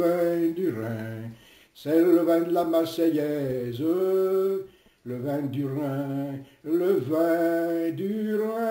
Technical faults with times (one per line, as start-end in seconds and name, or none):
0.00-8.71 imaging from sample-and-hold upsampling